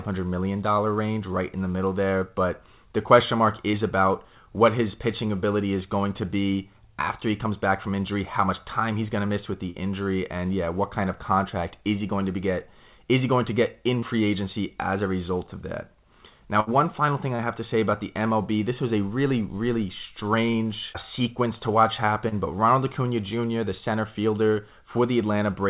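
Short concealed packet loss appears first at 3.71 s, again at 9.70 s and at 14.00 s. Each time about 30 ms of the call never arrived. The receiver stretched the last sound over the hole for 20 to 35 ms. It is heard as a quick smear or wobble.

At 16.60 s, just before "final thing", comes a burst of packet loss. About 60 ms went missing together. The last sound is held and turned down for about 70 ms, fading out, before the audio resumes.

The short concealed losses return at 17.36 s, between "final thing" and "have to say about". They come again at 20.51 s, just before "sequence to watch", and at 22.29 s. These carry the same brief smears. All of this sits inside a call path with nothing above 4 kHz, which fits a 64 kbps telephone-grade codec.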